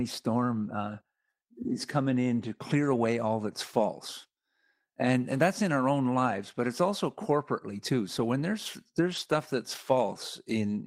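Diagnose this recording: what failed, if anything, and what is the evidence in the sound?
Lost packets rebuilt from error correction, at 2.91 to 2.93 s, 5.37 to 5.39 s and 9.11 to 9.33 s, point to the network stage, with recovery in the codec. The first two 20 ms patches fit a single lost packet each, and the 120 ms stretch fits a run of about six. Nothing drops out. The following packets carried low-bitrate copies of the missing audio, and the decoder played those, so the speech turns briefly rougher and noisier instead of going silent.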